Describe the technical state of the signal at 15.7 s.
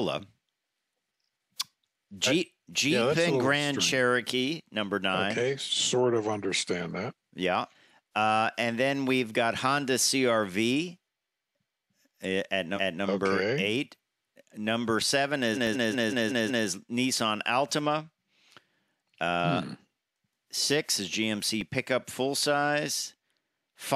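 At 15.7 s the speech stutters: a block of about 186 ms plays over and over from 15.54 to 16.65 s. These are repeated frames. A run of compressed frames, consistent with roughly four frames, was written out six extra times, stretching the clip by about 1.1 s.

Inside that stutter, at 15.67 s, the sound briefly flattens for 0.73 ms. This is an underrun with held sample: the output buffer emptied, the converter froze on its last value, and playback resumes past the sliver of lost audio.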